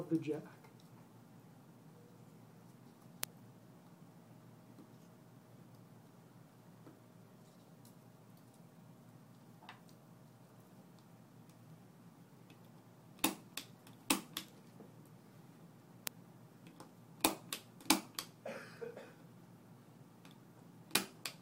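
From about 0.23 s right through to 21.27 s there are word clock ticks, sharp clicks of uneven strength roughly every third of a second, around seventy in all. The receiving device isn't locked to the sender's clock, and that pacing points to a mismatch of roughly 70 ppm, dropping or repeating a single sample each time they slip.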